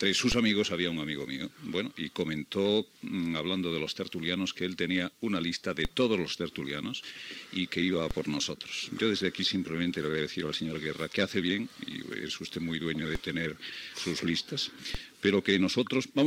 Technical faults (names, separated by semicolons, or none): DC step